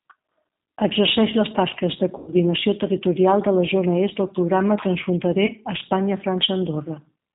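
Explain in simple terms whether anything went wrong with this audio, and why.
The whole recording passes through the G.729 codec, a phone-call compressor that rebuilds the voice from a simplified model. It sounds muffled and slightly robotic throughout, not just dull.

VoIP packet loss concealed by the speech codec happens twice, at 2.18–2.32 s and at 5.46–5.50 s. Missing pieces get filled with a stretched, buzzy or noisy, fading sound instead of silence or a click.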